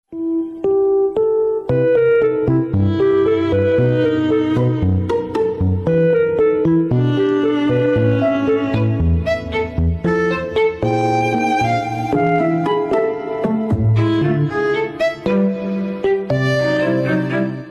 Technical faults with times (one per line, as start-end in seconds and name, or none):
none